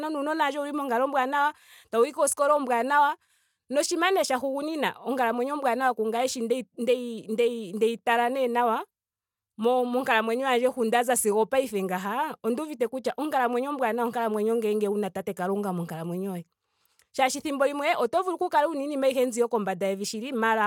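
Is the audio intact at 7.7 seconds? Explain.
Yes, the speech runs cleanly through 7.7 seconds with no dropout, click, distortion or other fault.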